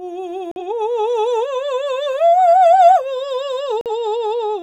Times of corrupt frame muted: 0.51-0.62, 3.81-3.91

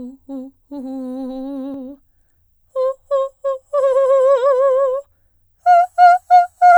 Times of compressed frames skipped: 1.74

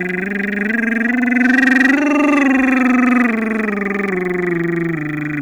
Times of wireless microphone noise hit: none

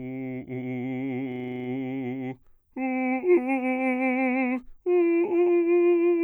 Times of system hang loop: 1.32-1.68

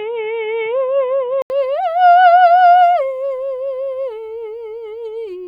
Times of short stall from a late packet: none

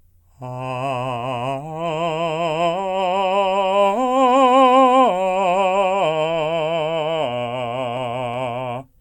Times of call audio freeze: none

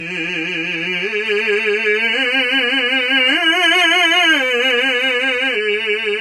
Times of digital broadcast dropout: none

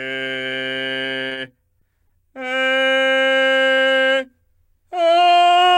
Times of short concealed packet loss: 1.29-1.37, 1.79-2.11

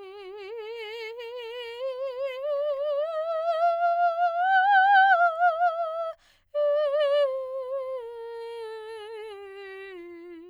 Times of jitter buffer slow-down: none

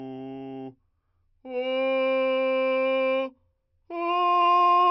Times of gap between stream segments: none

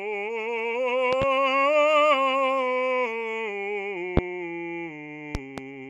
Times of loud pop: 1.13-1.25, 4.17-4.21, 5.35-5.61

